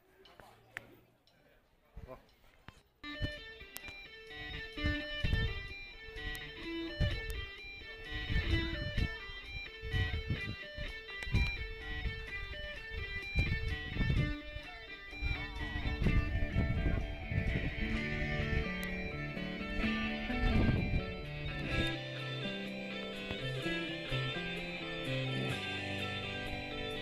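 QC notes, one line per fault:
3.77, 6.35, 7.30 and 18.84 s, bit error spike: each is a single-sample tick where one flipped bit briefly jumped the sample value by a power of two, then it returned immediately. The first peaks at about -11 dBFS, the rest at about -17 dBFS. A lone sample spreads energy evenly across the spectrum, so each sounds like a dry, pitchless tick unrelated to the surrounding sound. Unlike an edit click or dropout, there is no gap, step or level change.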